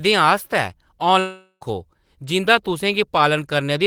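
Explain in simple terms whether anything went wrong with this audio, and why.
From 1.19 to 1.63 s the speech becomes a fading buzz, then brief silence: likely a long network dropout, with 0.42 s lost.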